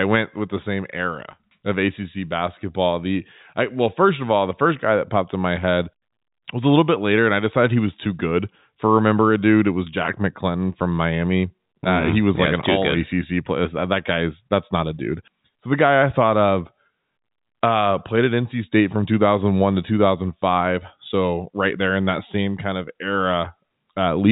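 No technical fault can be heard in this speech clip, which has come through G.711 A-law telephone coding as expected for that path, with nothing above about 3.8 kHz.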